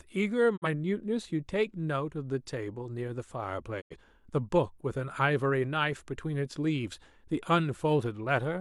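At 0.56 s the speech briefly drops out until 0.67 s, and it happens again, a bit longer, from 3.80 to 3.96 s. Both are digital broadcast dropouts: the receiver lost good frames and muted rather than play garbage, fading down over about 20 ms. The first hole loses roughly 43 ms of programme, which fits a single bad frame. The second loses about 85 ms, more like two. The speech comes back further along, so whatever was said in between is simply gone.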